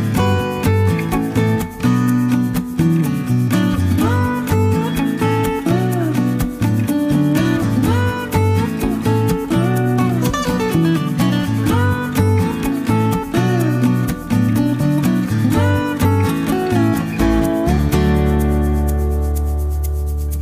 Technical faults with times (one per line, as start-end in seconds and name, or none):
none